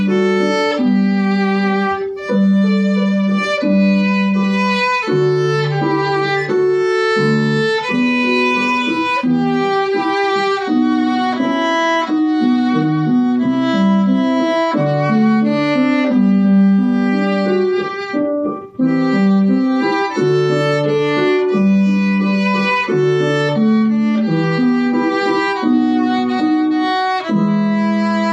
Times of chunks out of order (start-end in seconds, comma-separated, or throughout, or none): none